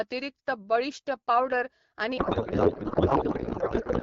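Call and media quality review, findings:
Codec payload misread from 2.17 s, right after "बळिश्ट पावडर", to the end: speech turns to garbled noise and warble barely tracking it. AMR-WB payload, sounds like octet-aligned framing parsed as bandwidth-efficient, so decoder fields land in the wrong bits. Before that, AMR-WB at what sounds like 12.65 kbit/s, light coding damage only.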